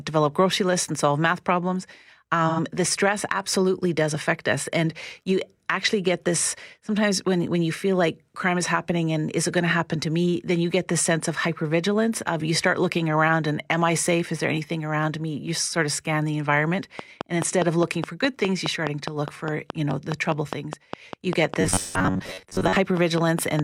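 From 2.48 to 2.60 s, just before "the stress absolutely does", AAC frame loss with concealment drops about 85 ms, which fits two lost frames. The decoder rebuilds that gap from the last good spectrum, leaving a brief smeared, noisy patch.

After "of scan the environment", from 16.99 to 23.60 s, a train of clicks (likely interference or a faulty connection) injects regular pulses at 4.85 per second, around thirty in all. They peak about 15 dB above the signal and tick steadily over everything, pauses included.

From 21.61 to 22.76 s, the audio likely arrives too seldom, so the software repeats short buffers and skips roughly half of the real audio. This robotic sound from repeated short buffers imposes a rigid 93.8 Hz metallic buzz, which fits a buffer of about 10.7 ms.

Inside that stretch, from 21.76 to 21.97 s, a second AAC frame loss with concealment covers 128 ms, consistent with three lost frames. 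The rebuilt audio adds another smeared, phasey patch on top of the buzz and clicks.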